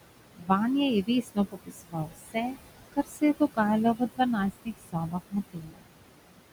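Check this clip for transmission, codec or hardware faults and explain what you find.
The faults here come from a noise suppressor, not from transmission or the codec. Two kinds can be heard.

Noise suppressor artifacts run through the whole clip. The room noise sits about 11 dB below the speech. The suppressor pulls it down by about 21 dB wherever it judges a band to be steady noise. It decides frame by frame, so the background drops away in pauses and comes back under the speech.

Speech cut by the noise suppressor happens six times. The spans are 0.36 to 0.50 s, 1.03 to 2.57 s, 2.93 to 3.22 s, 3.95 to 4.20 s, 4.65 to 5.35 s and 5.51 to 5.84 s. The suppressor mistook parts of the speech for noise and turned them down with the background. The deepest drops are about 13 to 22 dB. The worst are at 1.03 s and 5.51 s. The longest span loses around a second of speech in patches. There the speech sounds swallowed and faint.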